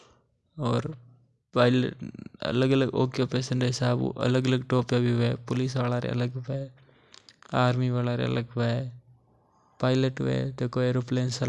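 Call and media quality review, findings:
Nothing stood out on listening to the speech; no findings to log.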